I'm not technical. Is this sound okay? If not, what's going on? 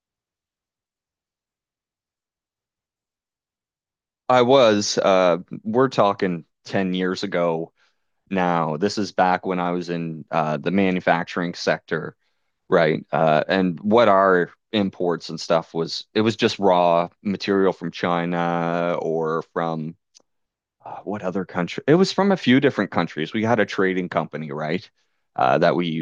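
Yes, this recording sounds fine, with nothing going wrong at any point. You can listen to it as it is.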